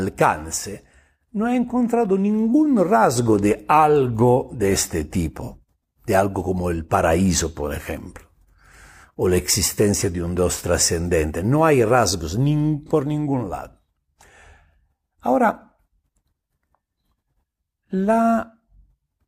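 At 12.86 s, between "hay rasgos ni" and "ningún lado", there is an AAC frame loss with concealment lasting about 43 ms, which fits a single lost AAC frame. The decoder rebuilt the missing stretch from the last good spectrum, so the speech briefly turns smeared and noisy instead of cutting out. That separates it from a plain dropout. A dropout leaves a hard silent gap, while here the sound keeps going but loses definition for a moment.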